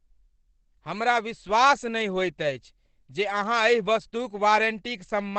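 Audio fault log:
Throughout, Opus compression: the speech was likely squeezed through Opus in its SILK speech mode at a low rate consistent with about 12 kbps, so nothing survives above 8.4 kHz and heavy coding damage leaves the speech muffled, dull and hoarse.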